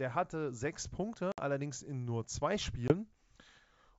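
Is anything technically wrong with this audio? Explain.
Yes, there are two dropouts from packet loss on an ADPCM call. The first runs from about 1.32 to 1.41 s and is roughly 60 ms of missing audio, about three packets' worth. The second, from 2.88 to 2.94 s, is a shorter 20 ms hole, likely a single packet. Each gap is filled with silence, so it cuts in and out with hard edges. Because the decoder's predictor and step size lose track of the sender's, the speech comes back with a little distortion. It settles within a few tens of milliseconds. The underlying G.722 wideband coding sounds like the full-rate mode.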